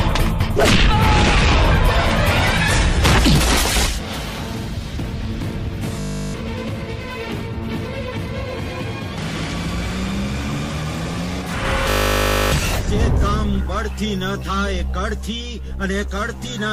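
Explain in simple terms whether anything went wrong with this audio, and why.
Two moments go wrong, both the same fault, a system hang loop. From 6.0 to 6.34 s and again from 11.9 to 12.52 s, the computer briefly froze while the sound hardware kept replaying the same 20 ms scrap of audio. Fifty repeats a second blur into a steady buzz rather than a stutter, and that is how it differs from a simple dropout, which would go silent. When the sound resumes, about a third of a second and then about two-thirds of a second are missing.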